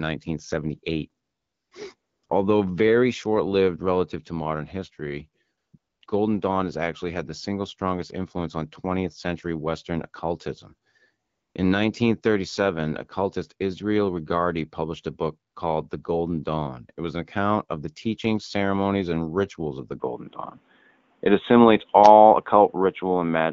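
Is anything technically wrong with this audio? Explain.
Yes. Two faults are audible.

AMR comfort noise fills pauses at 1.23–1.71, 1.95–2.23, 2.25–2.29, 5.57–5.73, 5.77–6.01, 6.05–6.07, 11.27–11.55 and 15.51–15.55 s. The phone stopped sending speech frames, so the receiver synthesised a smooth, steady hiss in place of the real background. Unlike a dropout, the gaps are never silent.

From 20.0 s to the end, the sound turns dull and boxy, with nothing above 3.8 kHz and a small level change. The likely cause is the input switching to a poorer device. Unlike codec band-limiting, it changes abruptly without a silence, and faint new background noise arrives with it.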